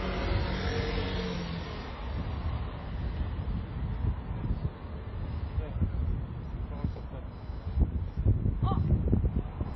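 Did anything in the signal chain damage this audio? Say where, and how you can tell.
Yes. Computer activity noise runs through the whole clip, entering at the analogue wiring stage. A chirping, buzzing pulse train sits at about 1 kHz, roughly 35 dB below the wanted signal, and its texture shifts independently of the audio itself. That independence is the giveaway. Processor, graphics or mouse load changes are modulating the ground shared with the audio circuit, so the host computer's activity rides into the signal path instead of anything in the recorded material.

The codec stage also left damage across the full length. Nothing survives above 5.8 kHz, and in the remaining band the artefacts of two different codecs are heard together. These two families of artefact don't come from one encoder. The likely cause is transcoding between lossy codecs, a very low-bitrate MP3 pass followed by HE-AAC at around 32 kbit/s. 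The second encoder spent its bits re-coding the first one's errors, and the lowest cut-off in the chain remained.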